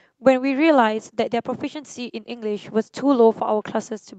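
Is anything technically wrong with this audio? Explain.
No, nothing is technically wrong with this audio.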